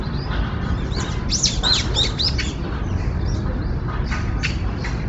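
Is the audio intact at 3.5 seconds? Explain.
No. At 3.5 seconds the sound carries the same heavy damage that runs through the whole clip, most likely from Bluetooth LC3 compression. Nothing reaches above about 7.8 kHz, and the upper band that remains has a breathy, grainy texture, because the codec discards much of the high spectrum and patches the gaps with noise. That fits a low bitrate near 24 kbps with short 7.5 ms frames. Plain low-pass filtering would instead leave a clean, dull top with no hiss-like fill.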